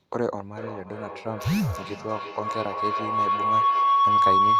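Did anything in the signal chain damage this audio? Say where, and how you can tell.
Yes. From 0.57 s to the end of the clip, a tone of around 1 kHz rises out of the speech and pulses roughly every 0.3 s, peaking about 7 dB above the speech and never dying away. That is a feedback howl, and the fault lies in the acoustic loop at the playback end. A loudspeaker and microphone on the same call share the room, and each pass gains level. The loop's delay sets the pulse rate.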